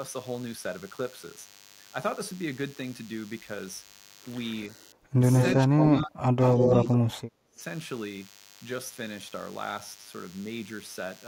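DECT cordless phone buzz runs from start to finish: a thin, steady 100 Hz buzz rich in harmonics, about 20 dB below the speech. A nearby DECT handset or base sends a radio burst every 10 ms, which the audio circuitry rectifies into sound.

Speech suppressed in double talk appears from 4.72 to 5.22 s, with the speech dipping by about 15 dB for roughly half a second. It returns more severely from 5.67 to 7.6 s, dropping by up to about 30 dB. The likely cause is an echo canceller that could not tell the talker from loudspeaker echo while both sides spoke, so it turned everything down.

Echo leak is heard at 5.38 to 5.55 s, 5.78 to 6.05 s and 6.4 to 6.98 s: a copy of the voice delayed by 172 ms. In the first two stretches it sits a few dB under the speech, and in the last it is about as loud as the speech. This is likely residual loudspeaker pickup that the loudspeaker side's echo canceller failed to remove and sent back.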